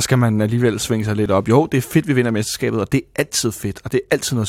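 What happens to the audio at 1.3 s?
Just after "man alligevel svinge sig", at 1.26 s, there is an overlap between stream segments. Two one-second segments claim the same moment. The player trims the shared stretch, so about 16 ms of speech disappears. The waveform jumps, and that is heard as a brief click or skip.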